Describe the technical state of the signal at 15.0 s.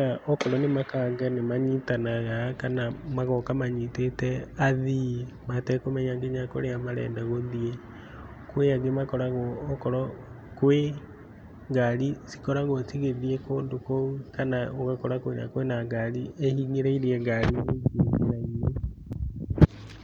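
At 15.0 s the speech signal is intact, with no dropout, clipping, glitch or other technical fault at that moment.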